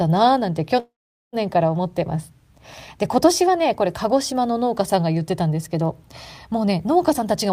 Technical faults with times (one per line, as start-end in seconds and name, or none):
0.79-1.36 call audio freeze
7.11-7.52 jitter buffer speed-up